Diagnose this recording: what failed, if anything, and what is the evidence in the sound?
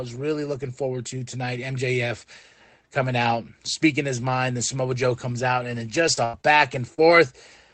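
Network packet loss repaired by Opus error correction. Right after "comes out and then", at 6.07 s, 6.17–6.19 s, 6.98–7.00 s and 7.10–7.12 s, roughly 20 ms stretches sound grainier and noisier, with no gap.

Short concealed packet loss, also a network problem. At 6.13–6.19 s (just after "comes out and then"), 6.41–6.55 s and 6.94–7.00 s, the receiver extends the last sound over 20–40 ms holes, giving quick smears and wobbles.

A burst of packet loss, again in the network. Around 6.25–6.35 s, about 80 ms goes missing. The sound stretches into a fading buzz or hiss, then jumps ahead once real packets return.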